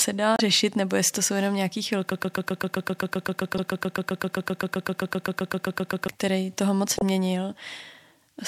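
At 0.35 to 0.40 s there's a short glitch where damaged data in the compressed stream throws the decoder off. It misreads the frames, loses sync and hunts for the next header. The same glitch recurs at 3.55 to 3.59 s and 6.96 to 7.02 s.

From 2.12 to 6.08 s the speech turns into a broken-record loop. A 130 ms fragment repeats 32 times back to back, likely because the stream stalled and kept resending its last chunk, so whatever should have played there is gone.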